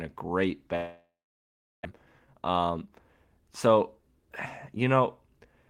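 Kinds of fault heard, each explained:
Long network dropout: The speech stops after "a great" at 0.75 s, likely because packets stopped arriving. The last sound is stretched into a fading buzz or hiss, then about 740 ms of near silence follows. Speech returns at 1.87 s with roughly 900 ms lost.
Jitter buffer speed-up: From 1.99 s to 3.00 s the speech runs about 16% fast at unchanged pitch. Delayed audio had piled up in the buffer. The receiver cut many short pitch-period pieces, roughly 150 ms in total, so the talking sounds hurried.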